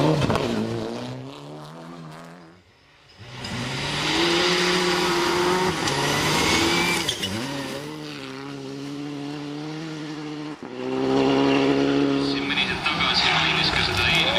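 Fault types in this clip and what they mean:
zipper noise: a level shift of roughly 15 dB made in 2 dB jumps, about twenty a second, each leaving a tiny click. A fast ticking rides on the sound from 10.67 to 11.18 s.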